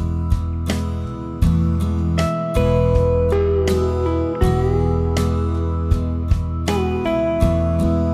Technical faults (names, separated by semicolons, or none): none